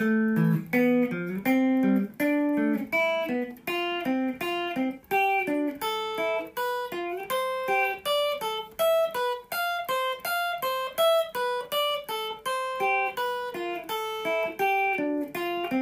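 Nothing in the audio points to a technical fault at any point in the recording.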